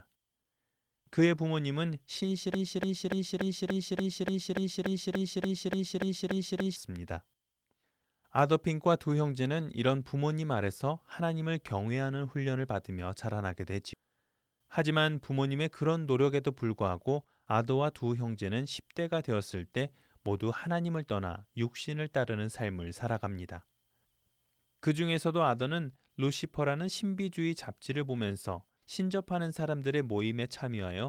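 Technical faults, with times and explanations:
2.54–6.76 s, broken-record loop: a 290 ms fragment repeats 15 times back to back, likely from a stalled stream resending its last held piece, and the audio for that span is lost.
13.93–14.01 s, skip ahead: playback jumps forward with almost no gap, dropping about 0.7 s of audio that was discarded while later packets were already queued.
14.53–14.92 s, jitter buffer speed-up: the receiver trims short pitch-period pieces, roughly 40 ms in total, so the audio runs at 109% speed without changing pitch.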